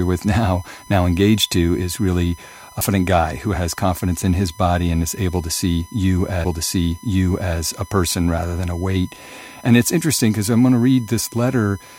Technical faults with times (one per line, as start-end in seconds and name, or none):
0.00-11.98 USB whine
2.81 CD skip
6.44 CD skip